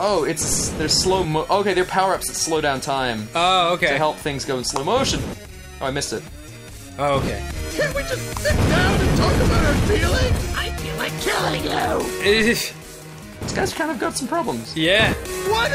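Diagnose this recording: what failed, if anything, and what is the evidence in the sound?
A DC step at 0.52 s, from the converter or analogue input, gives a low thump. The waveform's baseline jumps about -18 dBFS, then relaxes as a 5 Hz high-pass drains it.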